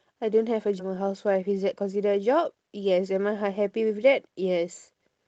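At 0.79 s, with later speech already waiting, a stretch of roughly a third of a second was dropped instead of played. This is a skip ahead: the speech jumps forward with essentially no gap, and the two sides of the missing piece are butted together.

From 0.88 s to 1.59 s the receiver, still holding more audio than it targets, trimmed short pitch-period-length pieces repeatedly to shrink the delay, cutting somewhere around 50 ms in total. This jitter buffer speed-up makes the speech run about 6% fast at unchanged pitch, sounding slightly hurried, heard through the Opus call path's band limit at 8 kHz.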